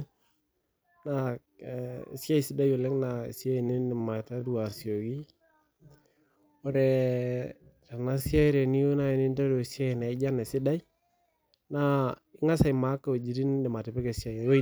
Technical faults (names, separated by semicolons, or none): time-stretched section